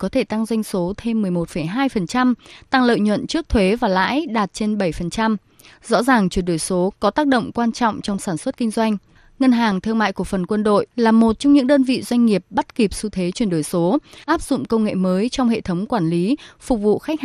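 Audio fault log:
throughout: MP2 compression. The dull, band-limited sound with granular, gurgling texture on the speech is likely MPEG Layer II coding starved of bits, consistent with roughly 80 kbps. Upper sub-bands drop out and flicker, and the remaining bands are coarsely quantised.
5.38, 8.08–8.18 (after "tác động quan trọng", before "sản xuất kinh doanh"), 9.69–9.72, 14.23–14.49 (after "thế chuyển đổi số", before "công nghệ mới trong"): DAB burbling. A small fraction of a percent of bit errors slipped past error correction, corrupting samples, so short blips of noise appear in single sub-bands.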